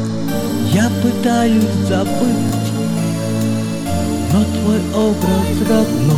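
Overlapping chunks cause a brief stutter at 2.49–2.52 s and again at 5.02–5.04 s in this audio. It was handled in 2.5 s chunks, each starting about 23 ms before the previous one ended, so that slice plays twice at every join.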